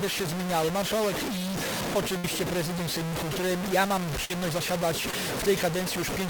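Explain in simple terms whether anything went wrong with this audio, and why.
Yes, a few things went wrong. The whole clip has a coarse, grainy roughness that rises and falls with the sound, and the quietest parts crumble or sputter. That's low bit depth without dither, likely from the audio being cut down to only about four bits and truncated, so the grit is almost as loud as the sound itself.

There are two bursts of packet loss, at 2.17 to 2.25 s and 4.25 to 4.31 s. Each time a chunk of audio didn't arrive, so the receiver stretched out the last bit of sound for roughly 50 to 60 ms, letting it fade, then jumped ahead with that stretch missing.

Finally, at 5.11 to 5.14 s there's a short concealed packet loss. About 20 ms never arrived, and the receiver papered over it by briefly continuing the previous sound before blending back in. You hear it as a quick smear or wobble rather than a real gap.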